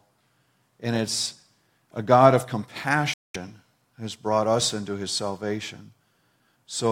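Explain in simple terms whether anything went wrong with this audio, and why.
Something did go wrong, most likely a Bluetooth stall. Radio interference seems to have delayed the wireless link, so the headphones ran out of stored sound before the missing pieces could be sent again. From about 3.14 to 3.36 seconds, the speech suddenly drops into silence for roughly a fifth of a second (about 210 milliseconds). It then carries on as if someone had briefly pressed pause.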